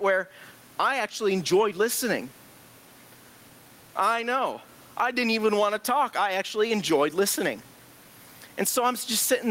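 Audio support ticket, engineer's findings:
Gain pumping throughout: gain swing around 15 dB. Likely cause: input gain far too high, fast limiter pulling it down. Distinct from a noise gate, since pumping swells background rather than cutting it; room noise sits about 40 dB below speech.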